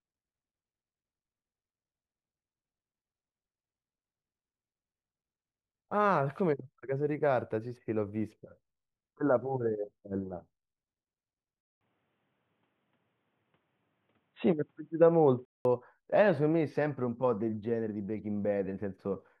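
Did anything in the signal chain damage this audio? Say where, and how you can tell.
Yes. From 11.61 s to 15.65 s the speech loses everything above 3.8 kHz and turns dull and boxy, after a 200 ms silence at 11.61 s. Its level shifts by roughly 5 dB, and a new noise floor appears about 50 dB below the signal. At 15.65 s the full band returns. This is likely an input switched to a poorer device at the capture stage, where the system moved to another microphone or a headset call profile and later switched back.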